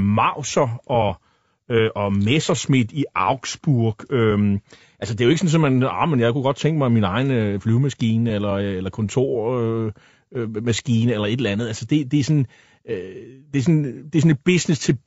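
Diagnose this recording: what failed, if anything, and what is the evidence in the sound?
The codec stage is the culprit: rough, grainy speech throughout, noisy between harmonics, likely low-delay AAC compression around 32 kbps, whose short frames smear pitch detail.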